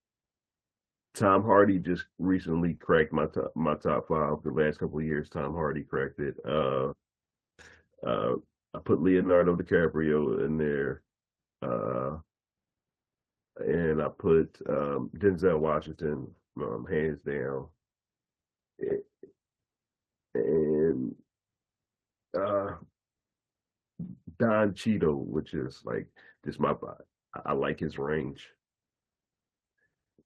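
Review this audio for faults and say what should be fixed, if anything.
Packets were lost in transit and rebuilt from the low-bitrate copy carried in the following packet (Opus in-band error correction): 2.73–2.75 s, 2.82–2.88 s, 24.06–24.08 s and 25.20–25.22 s. There is no gap, but those stretches of speech sound briefly rougher and noisier. The 40 ms stretch near 2.8 s fits two consecutive lost packets.

Short concealed packet loss occurred at 2.77–2.82 s and 24.05–24.08 s. Audio missing for about 20 ms, which fits a single packet, was filled by extending the preceding sound, for 23 ms and 14 ms. The result is a brief smear or wobble, and a short consonant may drop out.

A channel delay caused comb filtering from 12.26 to 14.29 s. One channel was late by less than a tenth of a millisecond, which fits a delay of a few samples, and summing to mono cancelled evenly spaced frequencies starting around 7 kHz. 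The speech there sounds hollow and phasey.

To prevent these, improve network stability with a larger jitter buffer, and keep the two channels sample-aligned before any mono downmix.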